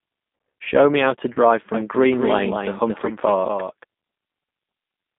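Throughout, the speech carries plainly audible G.729 codec damage: a rough, slightly synthetic quality from a low-rate coder that rebuilds the voice from a filter and a few pulses per frame, which fits 8 kbit/s G.729A. A spectrogram shows energy confined between 200 Hz and 3.7 kHz, with nothing above.

From 1.33 to 1.39 s, just after "me how to", VoIP packet loss concealed by the speech codec replaces about 30 ms of audio, consistent with a single lost packet. The decoder extends its last pitch and filter, so the sound is briefly stretched into a buzzy tone or coloured noise and fades before recovering. On a spectrogram this appears as smeared, repeated harmonics with falling energy.

From 1.74 to 3.84 s a doubled audio track appears, likely from a second, slower capture path mixed back in. An exact copy, about 5 dB quieter, trails the original by roughly a fifth of a second with no reverberant tail, and it starts and stops abruptly. 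The waveform shows a repeated, delayed envelope, and the spectrogram shows ghosted syllables.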